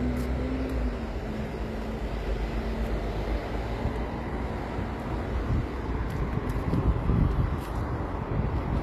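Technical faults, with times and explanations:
Throughout, HE-AAC compression: the treble is gritty and metallic, with nothing above about 14.9 kHz, likely rebuilt by band replication at a low bitrate near 24 kbps.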